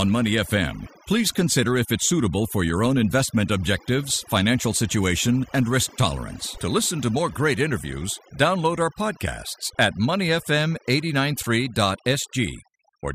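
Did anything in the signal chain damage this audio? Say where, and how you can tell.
Yes. Overdone noise removal runs through the whole clip, and it belongs to the processing stage, where a noise suppressor was set far too aggressively. Between phrases the background drops to near silence, dotted with twinkling, chirpy specks. The suppressor pulls individual frequency bands down hard whenever they sit close to its noise estimate, so stray bands flicker on and off, and the softer parts of the speech get removed along with the noise.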